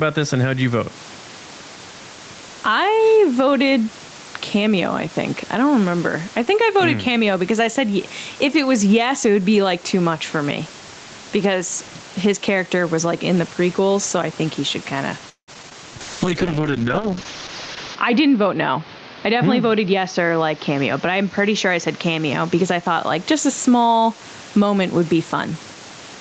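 Throughout the speech, the gain swings by roughly 10 dB, squashing loud and soft parts closer together. This gain pumping is likely from excessive input gain driving a fast limiter.

From 15.29 to 15.73 s, repeated packet loss leaves several gaps, the longest 184 ms. About half the span is concealed by continued sound, giving choppy speech.

From 15.73 to 16.26 s, a jitter buffer slow-down adds 45 ms by repeating pitch periods. Speech plays at 93% speed with unchanged pitch and sounds drawn out.

From 16.01 to 24.20 s, a call bitrate drop makes the speech rough and watery, most severely for about 1.9 s. The coarseness points to Opus falling from 32 to 7 kbps.

From 17.96 to 20.19 s, a jitter buffer speed-up trims about 150 ms of pitch periods. Speech runs at 107% speed at the same pitch and sounds hurried.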